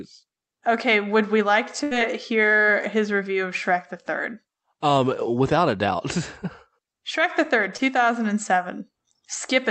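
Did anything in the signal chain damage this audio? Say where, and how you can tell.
Yes. A burst of packet loss occurs at 1.83 to 1.93 s, between "would we like" and "hear his review of". This is network damage. Packets were lost or arrived too late, so the receiver stretched the last sound for about 74 ms while fading it, and roughly 80 ms of audio never plays.

A short concealed packet loss appears at 7.77 to 7.81 s, just before "thousand and". It is also a network fault, heard as a brief smear. The decoder synthesised about 24 ms from the preceding sound to cover a 20 ms hole, then crossfaded back into the real audio.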